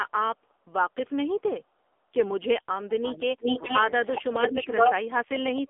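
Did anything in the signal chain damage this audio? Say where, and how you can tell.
Yes. AMR narrowband mobile codec, throughout the clip, at the codec stage. Nothing above about 3.7 kHz survives, and the line band runs roughly 250 Hz to 3.5 kHz. The speech is heavily damaged: buzzy and synthetic. The codec rebuilds speech from a vocal-tract model excited by a few pulses per subframe, and at a low mode it has too few bits to capture detail. This level of damage fits the 6.7 kbps mode.

Speech suppressed in double talk, at the call-processing stage, from 2.84 to 3.45 s, 4.5 to 4.75 s and 4.99 to 5.69 s. The level sinks by about 30 dB in the first and last spans. The middle span dips by only about 10 dB. These are likely moments where the echo canceller could not tell the near talker from the far-end echo and attenuated everything.

Echo leak, also at the call-processing stage, from 3.43 to 3.81 s and from 4.16 to 4.94 s. 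A delayed copy of the speech arrives 421 ms after the original, about 5 dB above the level of the direct speech. The consistent delay in both spans points to one acoustic path. This is likely a loudspeaker at one end feeding its microphone, with the echo canceller failing to remove the pickup, so the residue went back down the line.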